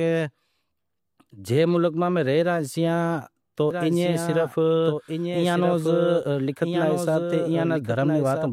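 A second, slower capture path or a misaligned edit has likely mixed the speech in twice: from 3.71 s to the end, a doubled audio track runs about one and a half seconds behind, roughly 5 dB quieter, entering abruptly with no decay or room colour.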